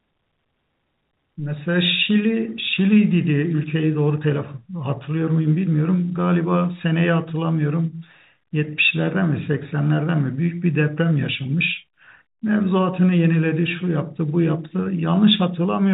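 No technical faults occur in this speech clip, which carries the band-limited sound of G.711 A-law telephone coding at 64 kbps.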